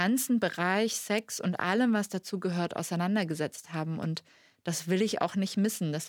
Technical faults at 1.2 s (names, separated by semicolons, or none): electrical switching spike